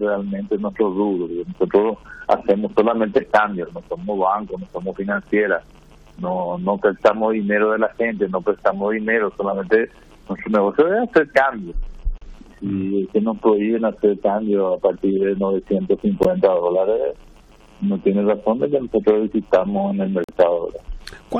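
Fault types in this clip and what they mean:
gap between stream segments: At the join between one 4-second segment and the next, the timestamps leave a short hole that the player fills with silence. The sound stops dead with hard edges and then resumes intact, at 12.18 s for 35 ms, at 16.23 s for 15 ms and at 20.24 s for 46 ms, spaced 4 s apart. Unlike a dropout, no audio is missing. Silence is inserted, and everything after it shifts slightly later.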